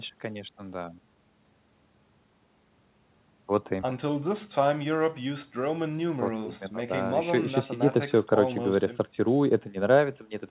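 A speech recording with no technical faults to point to. It has come over a WebRTC call path, and the band stops at 4 kHz, with the grain of companded telephone coding, which fits G.711 mu-law at 64 kbps.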